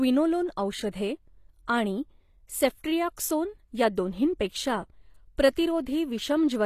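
From the first moment, the speech carries plainly audible codec damage, most likely HE-AAC compression at a low rate, around what a 24 kbps stream would give. The lower spectrum is coded directly. The treble is rebuilt by copying lower bands upward under a coarse envelope. It stays bright, but its harmonics no longer match the real ones. S sounds come out gritty and metallic. Nothing is present above 15 kHz.

At 0.92 s there is pre-echo. A sharp attack lands late in a transform block. The codec spreads its quantisation noise across the whole block, sized for the loud part. That noise spills into the quiet instant just before the attack, over about 14 ms. A brief hiss runs ahead of the onset. The attack itself sounds softened and smeared rather than crisp.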